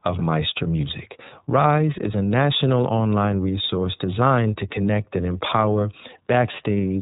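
Throughout, the speech passes through the iLBC codec, likely around 13 kbps with 30 ms frames, cutting everything above 4 kHz and leaving it plainly rough and synthetic.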